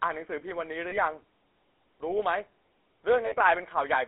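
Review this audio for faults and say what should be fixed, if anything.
The whole clip carries the buzzy, gravelly roughness of the GSM full-rate codec, with the sound confined to a 300 Hz to 3.5 kHz line band. The buzz fits full-rate GSM at 13 kbps. The codec rebuilds speech from a vocal-tract model excited by sparse, regularly spaced pulses, so fine detail turns into grit. Simple band-limiting would sound muffled but smooth, and the gravel is what marks this as codec damage. To prevent it, route the call over a wideband codec such as AMR-WB or a modern codec like Opus.

Lost GSM frames occur at 0.90 to 0.98 s and 3.26 to 3.35 s. At each, the sound freezes into a short, rough metallic ring. The first fits one lost 20 ms frame, and the second about three frames, around 60 ms. The decoder filled each gap by repeating the last good frame's settings. A plain dropout would go silent or click, but here the held, ringing tone gives it away. 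To prevent it, improve radio coverage or add stronger channel protection so fewer frames arrive corrupted.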